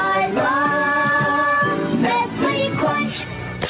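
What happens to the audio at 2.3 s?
Around 2.3 s you're hearing gain pumping, and it isn't just that moment; it runs through the whole clip. The level keeps swinging by roughly 15 dB. Loud and soft parts end up closer in level, so everything sounds squashed and breathing. The likely cause is input gain set far too high with a fast limiter clamping each peak. The dull, 4 kHz-limited top end is just the call codec doing its normal thing.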